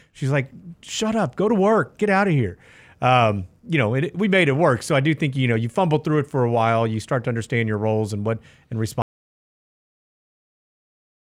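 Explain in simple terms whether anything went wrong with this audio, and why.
Something did go wrong near the end. At 9.02 seconds, right after "roles and what and", the speech stops in mid-flow. From there to the end of the clip there is total silence, with no room sound or hiss at all. This is an audio dropout to silence. The recording kept running, but it was writing nothing. The likely cause is that the input was lost, through a disconnected device, a broken link or an accidental mute. Whatever came next is gone.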